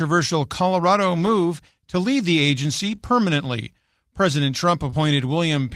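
At 1.21 to 1.31 s the speech turns briefly rough and noisy without any gap. This is a lost packet rebuilt from error correction: about 60 ms of audio, consistent with three separate 20 ms packets, never arrived, and the decoder played the reduced-bitrate copies carried in the following packets. The same happens over a longer stretch at 2.79 to 2.93 s, where about 80 ms is rebuilt and the grainier texture lasts accordingly.

Directly after that, at 2.95 to 3.00 s, comes a short concealed packet loss. Here 20 ms of speech was missing with no redundant copy, so the receiver extrapolated about 26 ms from the preceding sound and crossfaded back into the real signal, leaving a brief smear. A second concealed gap at 4.90 to 4.94 s fills about 21 ms, and its tail, 4.92 to 4.94 s, overlaps a single-packet error-correction rebuild of about 20 ms. The result is a short smear that shades into a rougher texture.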